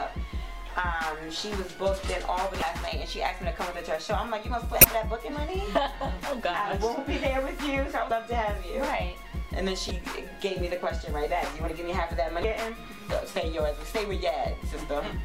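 Brief disturbances of about 30 ms each interrupt the audio at 2.59 to 2.62, 4.81 to 4.85, 8.07 to 8.11, 9.88 to 9.91 and 12.41 to 12.44 s. These are damaged data in a compressed stream: corrupted frames the decoder misreads or discards while it loses sync and searches for the next valid frame header.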